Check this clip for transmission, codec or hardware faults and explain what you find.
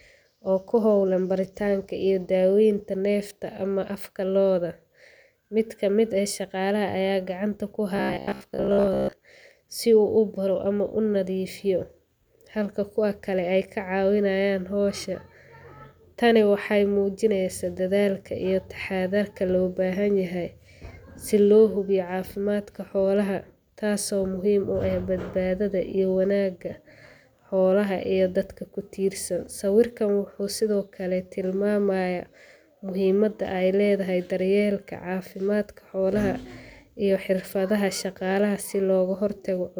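One fault is present: robotic sound from repeated short buffers, between 7.96 and 9.13 s. For just over a second the speech collapses into a rigid metallic buzz near 66.7 Hz that still loosely tracks the syllables. That pitch corresponds to a 15 ms repeat. The likely cause is audio arriving late, with the playback side looping the last 15 ms fragment to cover the gaps. Around 70 percent of that stretch appears to be filled this way, with the original audio skipped.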